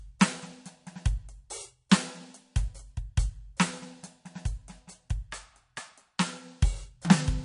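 This music clip carries plainly audible codec damage from start to finish. Nothing is heard above 10.6 kHz, so the top octave is simply missing. The cause is likely MP3 compression at a very low bitrate, around 40 kbps. With so few bits, the encoder cuts the treble at a fixed point. It also drops weak frequency lines, which flicker on and off between frames. That flicker gives the watery, swirling texture heard throughout.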